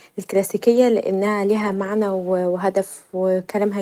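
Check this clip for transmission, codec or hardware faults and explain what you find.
Two brief stretches of the speech turn rough and noisy, without any dropout: lost packet rebuilt from error correction, at 0.75 to 0.77 s and 1.59 to 1.89 s. Each lost packet was replaced by the low-bitrate copy carried in the following packet, so the decoder filled about 20 ms and about 160 ms of audio from coarser data. The second stretch fits eight separate lost packets.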